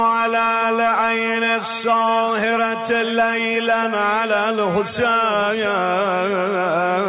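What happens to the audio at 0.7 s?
Nothing goes wrong at 0.7 s; the audio plays through that moment intact, with no dropout, click or distortion.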